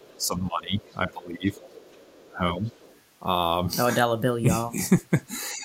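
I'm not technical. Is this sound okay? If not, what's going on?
No. Two related problems come from the call's echo handling.

The first is the other side's voice leaking through: a faint second voice sits behind the talker from 0.00 to 0.26 s, 0.80 to 0.95 s, 1.51 to 2.26 s and 2.65 to 3.01 s. It is quiet, loudest in the 1.51 s stretch. The likely cause is that the talker's device plays the other person through a loudspeaker, the microphone picks it up again, and the echo canceller fails to strip all of it out.

The second is speech suppressed in double talk: the talker's own voice dips and thins out from 0.19 to 1.48 s, for about a second in total, then again from 2.22 to 2.66 s, where the drop is deepest. Shorter, milder dips follow from 4.72 to 5.04 s and from 5.54 s to the end. This is likely the echo canceller hearing both people at once, failing to tell its own talker from the loudspeaker echo, and turning everything down together.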